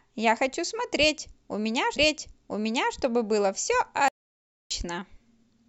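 A speech recording in which the player queued the same stream segment twice, so from 1.95 s to 2.95 s a stream segment repeated: almost exactly one second of talk plays again, with a small blip where playback jumps back. Later the input most likely dropped out while the encoder kept writing silence, an audio dropout to silence from 4.08 s to 4.71 s. The speech cuts off mid-flow into about 0.62 s of dead silence with no room tone, and whatever was said in that gap is lost.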